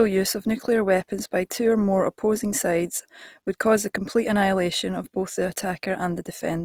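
From start to finish the speech has a rough, grainy edge, with a plainly audible noisy texture on the voiced sounds. That's likely Opus compression at a low rate, around 24 kbps in CELT mode, filling starved bands with noise. Content still reaches about 20.4 kHz.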